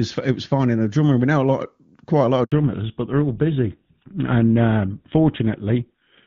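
At 2.44 s, just after "lot quite a lot", a handover gap cuts the speech for 80 ms. The call switches networks and no frames arrive, so the sound drops out abruptly and whatever was said in that stretch is lost until the new link delivers audio at 2.52 s.

From 2.52 s to the end, the call falls back to narrowband. The HD Voice link, which until then carried clean AMR-WB at a rate that fits 23.85 kbit/s, gives way to GSM full rate. Nothing above 4 kHz remains, so the speech sounds duller and rougher for the rest of the clip.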